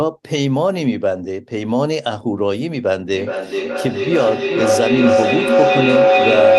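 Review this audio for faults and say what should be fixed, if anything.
From 3.13 s through to the end at 6.58 s there's a feedback howl. Sound from a loudspeaker is getting back into a microphone on the same call, and each trip round that loop returns a bit louder instead of dying away. It narrows to a tone somewhere around 500 Hz, with a loop delay of roughly 400 ms, and peaks about 5 dB above the speech. Underneath, the top end stops near 12 kHz, which fits a super-wideband Opus call codec. To prevent it, have people in the same room join from a single device, or mute the extra devices and use headphones.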